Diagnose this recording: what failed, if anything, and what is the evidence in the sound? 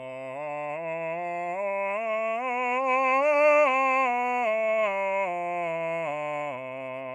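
Nothing failed: no stage of the chain, from wiring and conversion through to playback, leaves an audible fault anywhere in this music recording.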